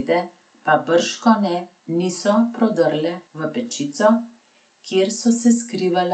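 No technical faults are audible.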